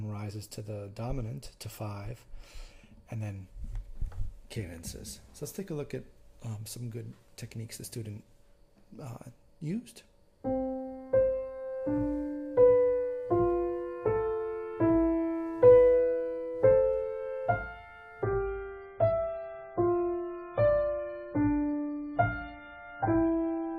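At 18.23 s the audio switches abruptly, with no gap, to an adaptive stream at a lower bitrate and stays there to the end. When the connection slows, the player fetches a leaner encoding, and this one discards everything above 4.8 kHz. That fits a drop from roughly 128 kbit/s MP3 to 16 kbit/s. The top end turns dull and swirly, with watery artefacts. On a spectrogram the energy above 4.8 kHz is sharply sliced off from 18.23 s onward, while the waveform shows no break.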